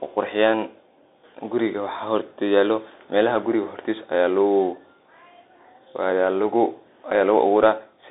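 Speech runs through a Bluetooth CVSD headset codec for the whole clip. The band is squeezed to about 250 Hz to 3.7 kHz. One-bit delta coding leaves granular hiss and scratchy sibilants, which fits a 64 kbps CVSD link.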